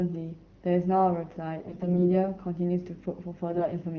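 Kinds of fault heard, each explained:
AMR bit errors, 1.60–2.18 s and 3.50–3.67 s: flipped bits in weakly protected frame data misplace the excitation pulses and skew fine pitch, gain and spectral values. The speech keeps its pitch and level but turns hoarse, scratchy and gargly, worst in the first burst.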